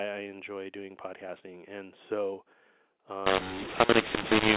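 From 3.27 s to the end at 4.56 s, the speech turns harsh and gritty, with levels jumping unevenly and any pause filling with noise. That is mu-law and A-law mixed up: the mu-law telephone samples are decoded as A-law, scrambling the companding curve and lifting near-silent samples.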